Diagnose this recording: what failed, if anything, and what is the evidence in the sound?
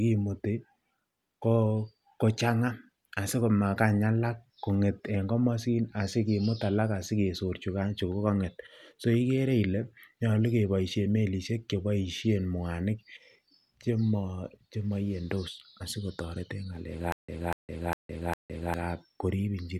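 A stutter with silent gaps runs from 17.12 s to 18.74 s near the end of the speech. A 242 ms fragment plays, then 162 ms of digital silence, repeating on a steady 404 ms cycle four times. The stage is playback or stream buffering. The likely cause is a stalled feed: each retry replayed the last buffered fragment and then ran dry. The speech that should have filled this span is missing.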